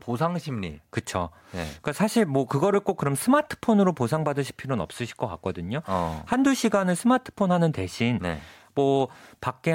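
From about 0.72 s to 9.16 s there's a click roughly every 1.41 s, about seven in all, landing on the speech at a dead-steady rate. That regularity points to clock drift buffer slips: two devices likely running on separate clocks, off by something like 150 ppm, so the buffer between them creeps until a handful of samples gets dropped or repeated, and each slip leaves a tick in the waveform.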